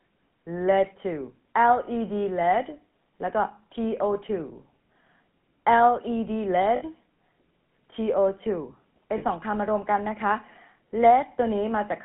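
Throughout, the sound carries plainly audible GSM full-rate codec damage, consistent with 13 kbps GSM full rate. The codec rebuilds speech from a vocal-tract model driven by a regular pulse train, which gives the speech its buzzy, gravelly roughness. The band runs only from about 150 Hz to 3.4 kHz. Plain band-limiting alone would sound muffled but smooth, so the grainy texture is what marks this as the codec.

At 6.76 s, about 60 ms of audio shows lost GSM frames, which fits three 20 ms frames. A second loss at 9.18 s lasts about 40 ms. In each case the decoder replaced the missing frames by repeating the parameters of the last good one, so the sound is held as a rough, metallic ring rather than breaking into silence, which sets it apart from an ordinary dropout. Both losses are short enough that neither is muted.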